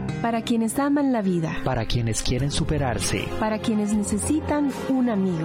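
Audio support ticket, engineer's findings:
Adaptive stream at a lower bitrate, 1.19 s to end of clip. Sudden step down in clarity with no gap, treble thinner, codec artefacts rising. Spectrogram: high band cut hard at 16.4 kHz from 1.19 s on. Waveform: no dropout or level jump at the switch. Probable component: player's adaptive bitrate logic switching to a lower rung after throughput fell, consistent with AAC stepping from about 96 to 48 kbit/s.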